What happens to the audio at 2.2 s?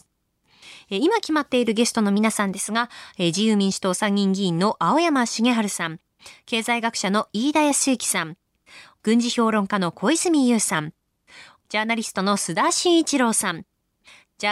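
From 2.17 to 2.69 s the speech briefly runs 5.9% fast and rises about a semitone (99 cents), then snaps back. This is likely a drift correction step, where clock-matching software jumped the playback rate. On a spectrogram, harmonics step up together, then drop.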